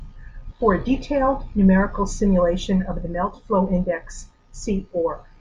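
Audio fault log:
No faults can be heard anywhere in this speech recording. Nothing in it calls for a timed entry.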